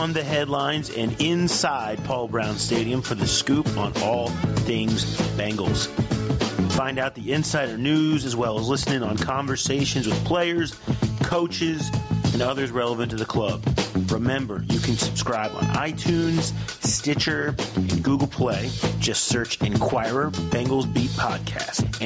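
Throughout the audio there is gain pumping, a swing of around 15 dB, so loud and soft passages sit unnaturally close together and the whole recording sounds squashed. The likely cause is input gain set far too high for the microphone, with a fast limiter or compressor clamping down on each peak and releasing in the pauses. On a waveform this shows as a flattened, brick-like envelope with the noise floor visibly rising between events. On a spectrogram the noise band brightens in each gap and darkens under each loud sound.

From 10.61 to 11.90 s a GSM phone buzz cuts in, a hard, raspy drone at about 217 Hz sitting about 32 dB below the signal and unrelated to it. It comes from a nearby 2G handset on a call, whose transmit bursts the audio circuitry rectifies, so it stays steady for that stretch. A spectrogram shows a comb of evenly spaced horizontal lines at 217 Hz and its many harmonics. 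Those lines run up to the 8 kHz ceiling left by the call microphone processing, which is normal. On the waveform, zooming in reveals a regular pulse train about 4.6 ms apart riding on the signal.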